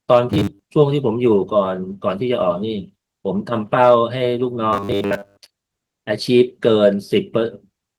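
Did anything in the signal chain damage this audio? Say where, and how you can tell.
Yes. From 0.30 to 0.64 s and again from 4.73 to 5.54 s the speech turns into a stiff, metallic buzz pitched at 100 Hz that still loosely tracks the words. This is robotic sound from repeated short buffers, most likely at the driver or buffer stage: audio arrived too late, so a 10 ms chunk was looped to fill the gap, and most of the real signal in those stretches was dropped and never heard.

Between 3.82 and 3.94 s the loudest peaks gain a brief, harsh crackle, the mark of hard clipping. The signal ran about 2 dB past what a converter or sample-format stage could carry, so the peaks were sliced flat. Those squared tops add harmonics high in the spectrum, which the ear picks out as grit on the peaks. The overload is mild and short, so it reads as a momentary crunch rather than sustained fuzz. The fullband Opus coding at 20 kbps adds only light damage of its own.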